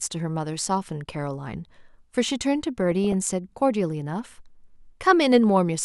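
Weak DAB reception let bit errors slip past the error correction between 2.92 and 3.13 s, with a residual error rate of around two in a thousand bits. Corrupted samples in the MP2 stream put short blips of noise in single sub-bands, and corrupted scale factors throw individual sub-bands to the wrong level for up to a frame. The result is DAB burbling: a short stretch of burbling laid over the speech, consistent with roughly a dozen damaged frames.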